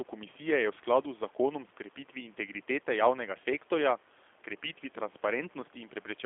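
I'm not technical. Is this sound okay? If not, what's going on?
No. The speech passed through a G.729 codec, a low-data phone-call system that rebuilds the voice from a simplified model instead of sending the real sound. Throughout the recording it sounds thin and muffled, like a phone line, with a plainly audible rough, slightly robotic edge.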